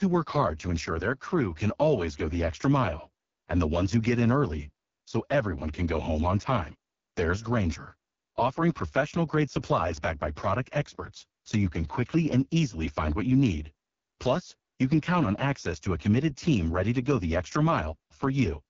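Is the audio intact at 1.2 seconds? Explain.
No, at 1.2 seconds the speech sounds rough and raspy with nothing above about 7.2 kHz, from the AMR wideband (HD Voice) codec running throughout at what sounds like its lowest rate.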